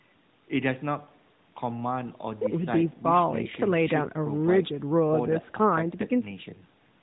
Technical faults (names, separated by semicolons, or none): none